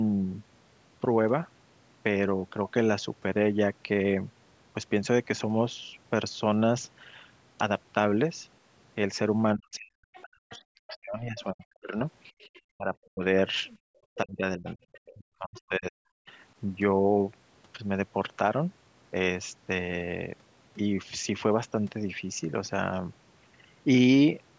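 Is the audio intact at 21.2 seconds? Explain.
Yes, the speech at 21.2 seconds is intact, with only the normal low-bass roll-off of call microphone processing, which is not a fault.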